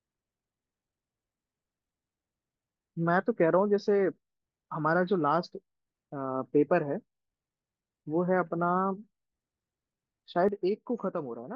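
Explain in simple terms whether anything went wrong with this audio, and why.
One thing goes wrong near the end: a sudden gain jump. At 10.49 s the whole speech clip abruptly gets quieter, background noise included, and stays that way to the end. That's likely a volume setting applied instantly instead of being eased in.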